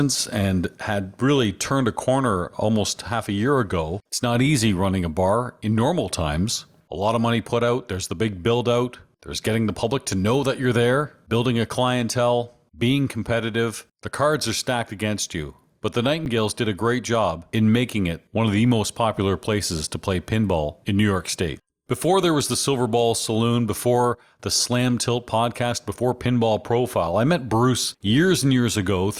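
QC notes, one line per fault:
16.25 s, underrun with held sample: the output buffer ran empty for 10 ms and the converter held its last value, so speech stops without a click; about 10 ms of audio was lost before it resumed on "did a great job".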